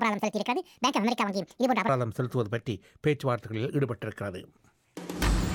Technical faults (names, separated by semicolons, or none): section at the wrong speed